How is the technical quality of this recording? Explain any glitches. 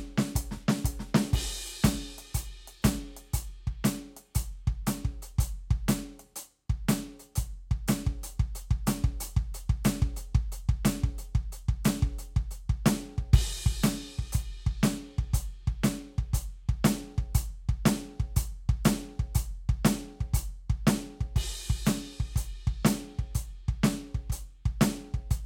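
No technical glitches are audible in this music.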